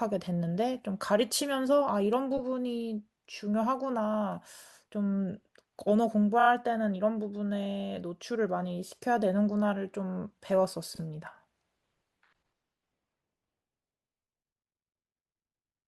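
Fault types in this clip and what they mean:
repeated frames: brief stutters as short 10 to 40 ms blocks of speech replay up to three extra times, lengthening the audio.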